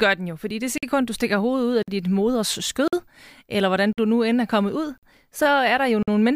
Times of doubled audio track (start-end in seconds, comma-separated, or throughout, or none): none